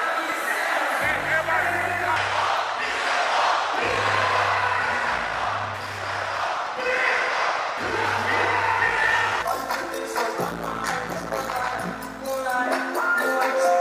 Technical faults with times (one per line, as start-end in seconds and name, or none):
4.97-11.40 Wi-Fi interference